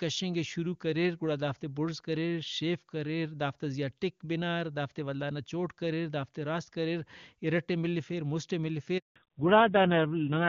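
A handover gap runs from 8.98 to 9.16 s in this speech recording: the call was passed from one network to another, and for about 180 ms no speech frames arrived, so the voice drops out abruptly and the audio falls silent until the new link picks up. Whatever was said in that stretch is gone rather than muffled. Before the gap the wideband HD Voice codec is carrying the call, and at a rate that sounds like one of its highest modes it leaves little or no audible coding damage. A fallback to narrowband follows from 9.16 s to the end: once the new link resumes, the call has switched from wideband coding to the older narrowband codec. All content above 4 kHz disappears, taking the crisp sibilance and airy top with it. The voice becomes dull and boxy, and it picks up a rough, buzzy grain that points to a low-rate narrowband mode.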